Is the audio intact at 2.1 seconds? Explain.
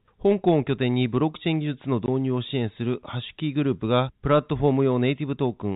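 No, there's a packet loss filled with silence from 2.06 to 2.08 s, just before that mark. About 20 ms of speech drops out, which fits a single lost packet, and the receiver played silence in its place, so you hear a brief hole with hard edges.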